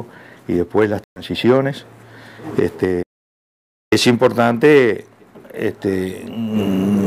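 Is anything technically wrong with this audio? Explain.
Yes. From 1.04 to 1.22 s there is a likely Bluetooth dropout: packets missed the headphones' deadline and were discarded, leaving a hole before the sound resumes further along. From 3.03 to 3.92 s there is an audio dropout to silence, likely from a lost input while the recorder kept writing silence. The sound cuts off into silence with no room tone for about 0.89 s, and the missing audio is gone.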